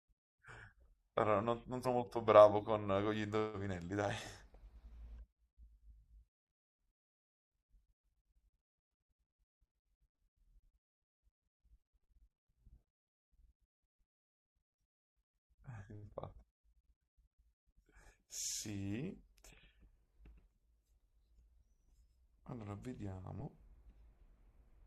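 At 1.84 s the speech jumps forward by about a tenth of a second, a classic case of compressed frames skipped: a run of frames never got decoded, so the decoder just carried on from later audio.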